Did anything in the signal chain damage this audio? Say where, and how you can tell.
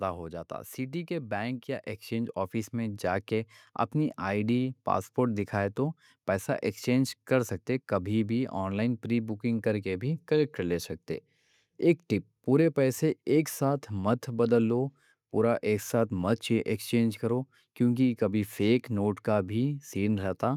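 Yes: automatic gain rising from 1.07 to 3.58 s, in the call-processing stage. The speech and the background noise floor swell together by about 6 dB over those two and a half seconds, because the gain control judged the input too quiet and ramped up its gain.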